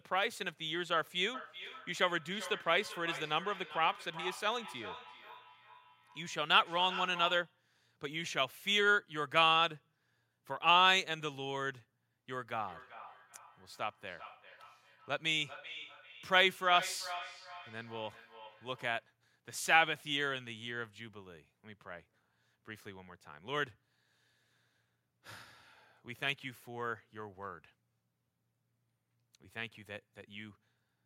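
A second device in the room plays the call back into an open microphone, causing feedback echo between two devices from 1.34 to 7.61 s and again from 12.67 to 19.1 s. The speech returns roughly every 400 ms, peaking about 14 to 15 dB below the direct voice.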